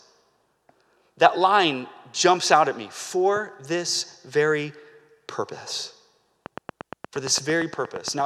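Speech, with a train of clicks from 6.46 to 8.21 s: about fifteen evenly spaced pops at 8.6 per second, peaking around 10 dB above the speech, likely from interference or a faulty connection. A spectrogram shows regular thin vertical broadband stripes, and the waveform shows matching sharp spikes.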